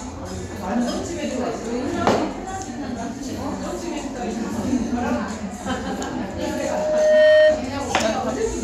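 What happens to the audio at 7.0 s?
Loudspeaker feedback squeal runs from 6.29 s to 7.71 s, so at 7.0 s the sound is in the middle of it. A microphone is hearing the loudspeaker it drives, and at 616 Hz the loop returns more than it sends, so that frequency feeds on itself. The tone swells over about a second to roughly 15 dB above the sound underneath, heard as a steady howl at that pitch.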